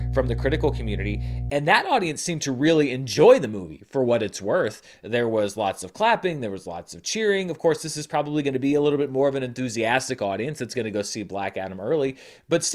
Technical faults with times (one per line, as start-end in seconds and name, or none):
0.00-1.50 mains hum